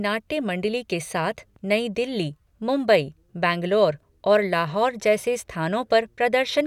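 No technical faults are audible.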